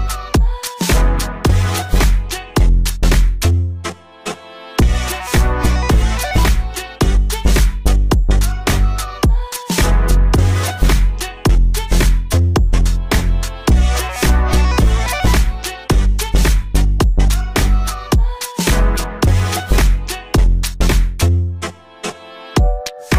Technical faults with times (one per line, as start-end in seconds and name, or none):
none